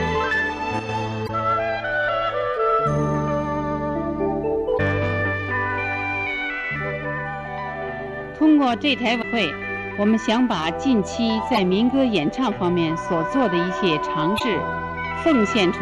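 A short, abrupt sag in level from 0.79 to 0.89 s, with the sound falling by about 6 dB and then snapping back, is most likely one channel dropping out: with one side of the stereo pair briefly lost, the mono sum keeps only half of the shared content. Brief glitches then break through at 1.24 to 1.30 s, 4.74 to 4.80 s, 9.18 to 9.24 s, 11.55 to 11.58 s and 14.36 to 14.41 s. These are damaged data in a compressed stream: corrupted bytes make the decoder misread those frames and lose sync until it locks onto the next valid frame header.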